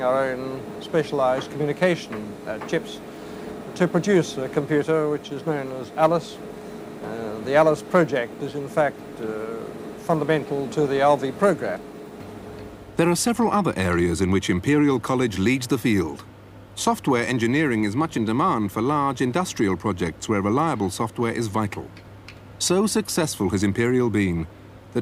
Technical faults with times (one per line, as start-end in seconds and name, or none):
none